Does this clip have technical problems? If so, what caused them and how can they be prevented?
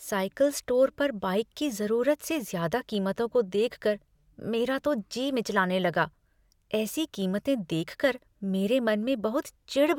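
No, nothing in this speech recording points to a technical fault. With no problem to trace, there is no cause to report and nothing that needs preventing.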